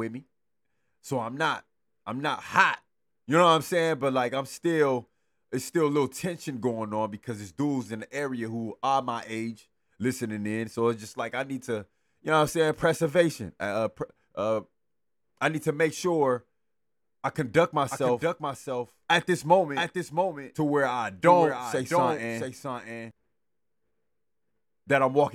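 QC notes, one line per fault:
17.91–23.11 s, doubled audio track: after "I conduct" a second full-band copy of the speech runs about 0.7 s behind the original and a few decibels quieter, about 5 dB down, so each phrase is heard again as a flat, dry repeat with no room decay, beginning and ending abruptly at the range edges. This is likely the same signal reaching the mix twice, once through a slower capture path or a misaligned duplicate in the edit.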